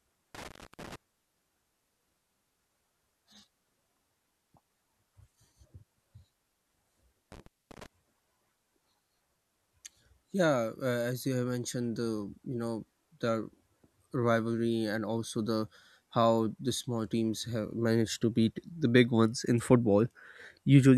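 The speech drops out twice, at 0.35 to 0.96 s and at 7.32 to 7.86 s, with crackle at each edge and gaps of about 0.29 s and 0.24 s. This is intermittent contact: a loose cable or plug briefly opening the signal path.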